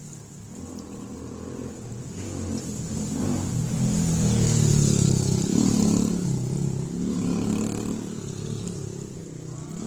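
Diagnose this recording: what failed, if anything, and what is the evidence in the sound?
Throughout the recording the sound is noticeably grainy and rough, with tonal parts breaking into a hissy, textured noise rather than staying clean. There is little of the hollow, swirling quality of holes in the spectrum, and the top end remains present. The failure sits at the codec stage, likely Opus compression in its music mode. The encoder kept each band's energy but, short of bits, filled the detail with folded or synthetic noise, which points to a low bitrate of around 16 kbps.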